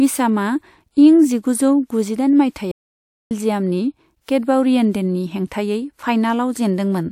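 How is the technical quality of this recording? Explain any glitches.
One glitch stands out in the speech. From 2.71 to 3.31 s there is a playback stall: the player likely ran short of data, so the speech drops into silence for 0.59 s before resuming.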